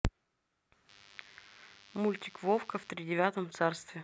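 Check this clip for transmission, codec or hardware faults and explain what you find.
One hardware fault is present. From 0.89 to 2.89 s, DECT cordless phone buzz: radio bursts every 10 ms are rectified, giving a thin 100 Hz buzz roughly 25 dB under the speech, harsher than smooth mains hum.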